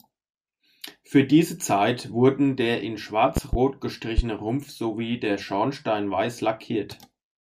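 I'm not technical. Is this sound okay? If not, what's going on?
No. A sudden electrical jolt, likely from a plug, switch or static, got into the recording and caused loud pops. Two sharp pops land close together from 3.37 to 3.57 s, right after "wurden der in", and another hits at 4.18 to 4.22 s, while the speech carries on underneath.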